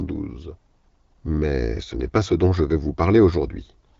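The clip is speech, and from start to finish it carries the sound of the AMR wideband (HD Voice) codec working at one of its lowest rates, which fits the 8.85 kbit/s mode. The damage is plainly audible as a rough, raspy texture, because so few bits remain for the pulse excitation that drives the vocal tract model. The band ends at about 7.1 kHz, and the top slice below that is filled with shaped noise rather than coded detail.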